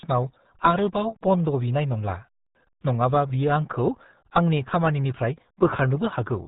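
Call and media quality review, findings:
RealAudio 14.4 codec, throughout: RealAudio 1 encoding, consistent with roughly 8 kbit/s, heavy damage. Nothing passes above 3.8 kHz; speech muffled, gargly. Probable component: legacy dial-up codec stage in the media path.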